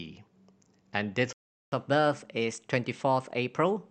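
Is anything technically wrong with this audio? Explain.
Yes. There are two related faults: a playback stall followed by catch-up at higher speed.

The playback stall runs from 1.33 s to 1.72 s. The speech cuts off mid-flow and the output is silent for about 390 ms before the sound resumes. The likely cause is the player running short of buffered data or having its audio thread blocked, so nothing reached the output until it recovered. It is heard as an abrupt hole in the audio rather than a fade.

Catch-up at higher speed follows from 1.72 s to the end of the clip. To recover the lost time, the player resamples its backlog and runs it at 1.1 times normal speed. Because resampling shifts pitch along with tempo, the speech sounds slightly hurried and raised by roughly one and a half semitones, audibly higher and quicker than the audio before the stall.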